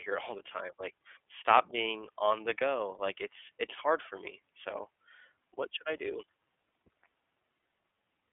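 The speech sounds plainly rough and synthetic throughout, with nothing above 3.6 kHz: the iLBC codec, whose independent 30 ms frames point to 13.33 kbps.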